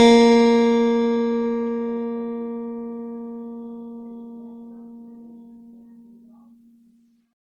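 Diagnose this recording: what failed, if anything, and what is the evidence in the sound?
The failure sits at the codec stage and runs through the whole music clip: generation loss. The sound is swirly and hollow, with smeared transients and blurred attacks, more degraded than a single pass at a moderate bitrate would produce. The likely cause is repeated lossy re-encoding, consistent with Opus at around 64 kbit/s applied roughly seven times. Each pass requantises on a shifted frame grid, so noise and spectral holes accumulate rather than cancel.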